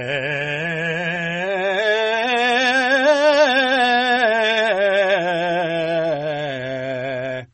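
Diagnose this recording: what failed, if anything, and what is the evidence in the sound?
The failure is at the codec stage, likely MP3 compression. The whole music track stops dead above 8.4 kHz and has an obvious watery swirl, as weak frequency lines drop in and out frame to frame. That points to a starved bitrate, roughly 32 kbps.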